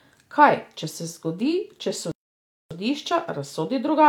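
A speech recording that was likely squeezed through a low-bitrate codec first and then saved again as a high-bitrate MP3, the pattern of low-bitrate audio saved at a high bitrate. The larger second encoding cannot bring back what was lost, so the artefacts of the first pass remain throughout, with nothing above 18.5 kHz, which fits an earlier low-rate stage such as HE-AAC at around 40 kbit/s. A playback stall, probably the player running short of data, cuts the audio to silence right after "če se zgodi če" from 2.11 to 2.71 s, a gap of about 0.59 s, before the sound picks up again.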